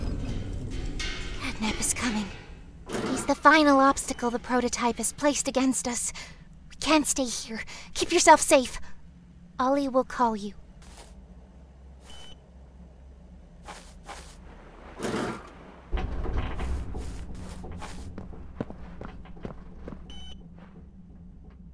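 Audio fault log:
No fault is heard in this audio.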